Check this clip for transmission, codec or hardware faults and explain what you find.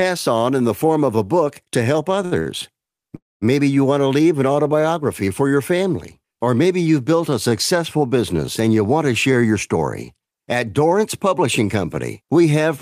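Three kinds of network delivery fault show up in the received speech, all tied to the jitter buffer.

Two short stalls from a late packet sit close together, at 2.25–2.34 s and 2.40–2.48 s. Each time a packet missed its playout slot, the buffer emptied, and the receiver extended the last sound for about 62 ms until the data turned up, then carried on from the same point. Nothing is lost. Instead a sound is drawn out slightly, with a faint buzzy or dipping quality, twice in quick succession.

A call audio freeze follows at 3.16–3.44 s. The likely cause is packets held up in transit long enough to drain the buffer completely. The receiver first continues the last sound as a decaying buzz, and then about 210 ms of the roughly 258 ms insertion is plain silence before playback resumes where it stopped. The speech is interrupted by a gap rather than clipped, so no content is missing.

A jitter buffer speed-up runs from 9.44 to 10.31 s. 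Having built up more queued audio than its target, the buffer sheds the excess by cutting many tiny pitch-period-sized slices, about 70 ms in total. That plays this stretch at about 106% speed with the pitch unchanged, so the speech sounds slightly rushed.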